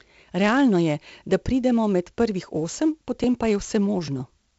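4-bit ADPCM compression runs throughout the speech. Each sample is coded as a coarse step from a prediction, leaving heavy gritty hiss on loud sounds and nothing above 7.7 kHz, which fits about 64 kbps.

A dropped buffer (overrun) occurs at 3.24 s, just after "pridemo med prvih osem", and again at 4.08 s. Each is a point where the sound jumps ahead, most likely because roughly 10 ms of samples were overwritten before being read.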